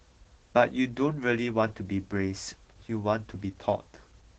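Opus voice compression runs throughout this speech clip. The codec is in its SILK linear-prediction mode at a low rate that points to roughly 12 kbps, with the band capped at 8 kHz and the excitation coarsely coded. The result is muffled, hoarse and slightly robotic speech.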